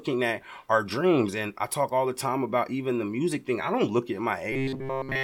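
From 4.52 to 5.24 s the speech turns into a rigid, metallic buzz fixed at 133 Hz, loosely tracking the words throughout. This is robotic sound from repeated short buffers, likely caused by a segment of about 7.5 ms being looped while incoming audio was skipped.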